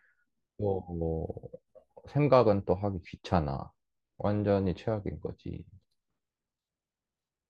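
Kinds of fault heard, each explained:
No technical fault can be heard in the speech recording; the signal stays intact and continuous throughout.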